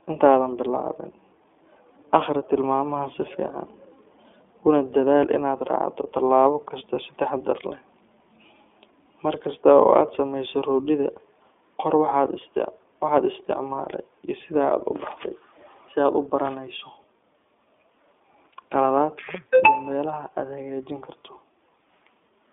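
iLBC codec damage runs throughout the speech, which is confined to roughly 250 Hz to 3.5 kHz with nothing above 3.7 kHz. Each 20 ms frame is coded independently, leaving a plainly audible rough, synthetic edge that fits the 15.2 kbps mode.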